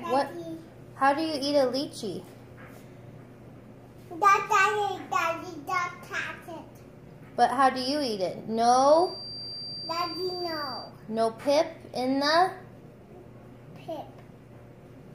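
From 8.83 s to 10.93 s a thin, steady whistle at 4.7 kHz sits roughly 15 dB under the sound, its level swelling and fading slowly. This is a feedback whistle, likely from a loudspeaker-to-microphone loop held just at the edge of oscillation, so a single tone rings on without building. Unlike runaway howl, it never swells toward clipping, and its slow swelling and fading sets it apart from a fixed electrical tone.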